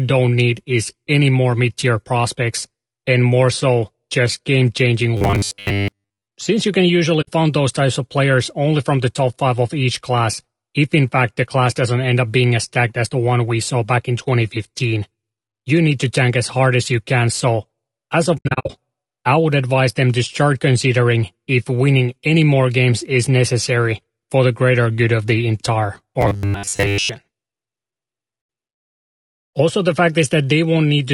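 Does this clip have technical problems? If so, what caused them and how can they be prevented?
Yes. Throughout, the speech sounds rough and grainy, with noise between harmonics and a dull or synthetic top. That's likely low-delay AAC compression (AAC-ELD) at around 32 kbps, where the short frames can't resolve pitch well. Give the codec more bitrate, say 48 to 64 kbps, if the link allows.

From 5.17 to 6.26 s and again from 26.21 to 27.09 s, the speech turns into a metallic 100 Hz buzz. This is likely robotic sound from repeated short buffers: most of the audio there is replaced by loops of about 10 ms. Fix the audio thread's scheduling, or use a bigger buffer so new audio arrives on time.

There are soft-edged dropouts from AAC frame loss with muting: about 60 ms at 7.21 s, about 80 ms at 28.41 s, and between 18.37 and 18.70 s roughly 240 ms silenced in scattered pieces, the longest about 70 ms. 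Add packet loss concealment and forward error correction, or a larger jitter buffer.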